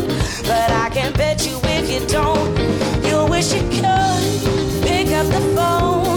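Audio with one fault: at 4.69 s, running to 4.74 s, compressed frames are skipped. The sound leaps forward by roughly a tenth of a second, which points to about two frames of 46.4 ms each, missing from the file or rejected by the decoder. A spectrogram shows an abrupt discontinuity, and the waveform shows its envelope suddenly shifting.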